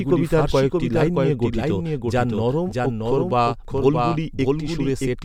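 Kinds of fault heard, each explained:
Doubled audio track, throughout: a second full-band copy of the speech runs behind the original by a fixed gap of roughly 0.7 s, at about 5 dB below it, so every phrase is answered by a dry, uncoloured repeat with no decay or room sound. It is most likely a second capture of the same source arriving through a slower path, or an edit that left two copies overlapping out of step.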